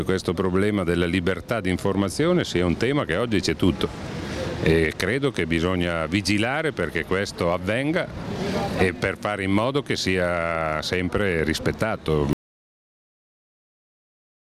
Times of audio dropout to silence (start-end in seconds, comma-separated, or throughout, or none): 12.33-14.45